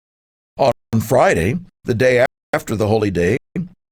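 At 0.72 to 0.93 s, 2.26 to 2.54 s (after "the day", before "the holy") and 3.37 to 3.56 s (after "the holy"), the speech drops into blocks of digital silence of about 213, 279 and 186 ms, the last fitting an 8192-sample block. The output buffer likely wasn't filled in time, so zeros play instead, and the sound cuts out and back with no fade. The waveform shows flat lines, and the spectrogram shows black vertical bands.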